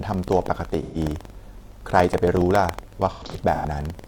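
Buffer tearing runs through the whole clip. Each buffer carries a small slice of audio about 150 ms old, giving a 21.5 Hz robotic rattle that fits a 2048-sample buffer.

AAC frame loss with concealment hits from 0.82 to 0.98 s, then repeatedly from 3.13 to 3.65 s. The decoder patches lost frames from earlier spectra, so the speech turns briefly smeared and noisy.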